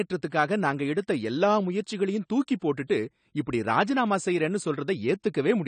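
From start to finish the speech carries AAC compression damage. Nothing sounds above 9 kHz, so it is dull. Sibilants turn fizzy and smeared, with a warbling texture. This likely comes from an AAC-LC encoder at a low bitrate, about 32 kbps.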